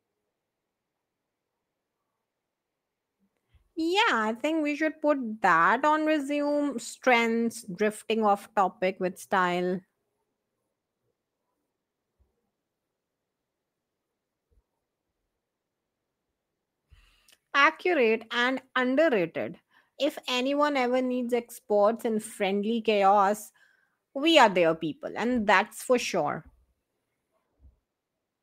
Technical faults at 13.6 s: none

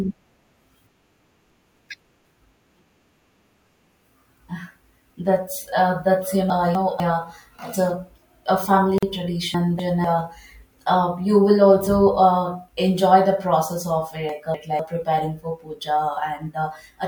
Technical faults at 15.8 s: none

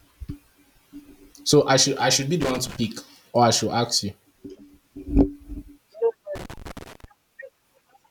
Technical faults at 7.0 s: loose connector crackle

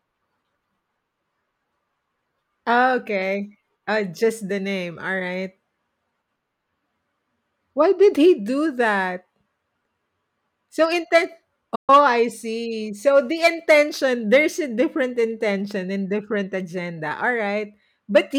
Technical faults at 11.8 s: digital broadcast dropout

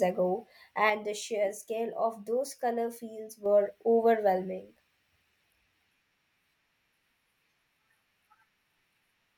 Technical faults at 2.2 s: sudden gain jump

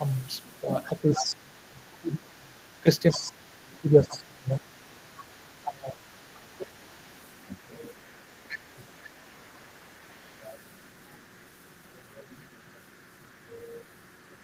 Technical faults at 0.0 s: none

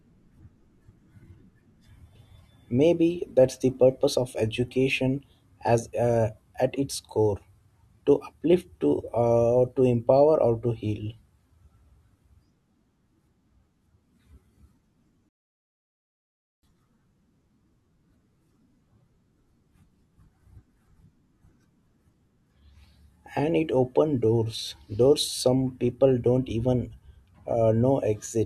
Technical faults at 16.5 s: 24-bit alignment error (too quiet)

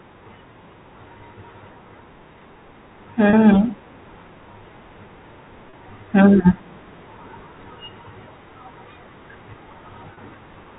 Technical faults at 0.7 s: none

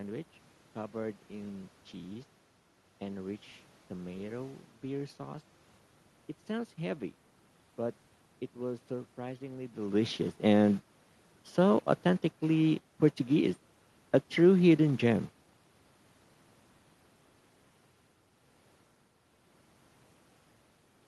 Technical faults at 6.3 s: none

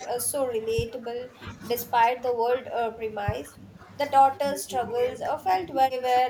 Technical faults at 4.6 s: speech suppressed in double talk

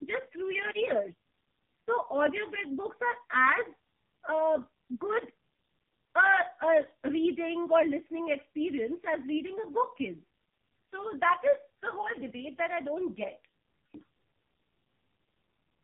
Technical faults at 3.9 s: AMR narrowband mobile codec

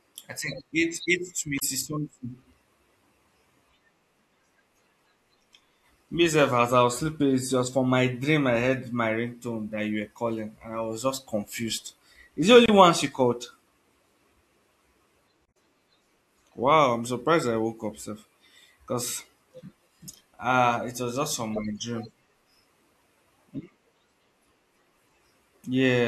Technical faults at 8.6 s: none

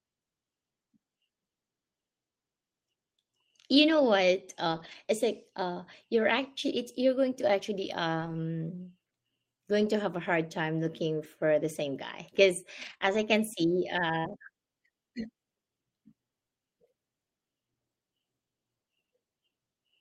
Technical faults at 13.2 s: lost packet rebuilt from error correction

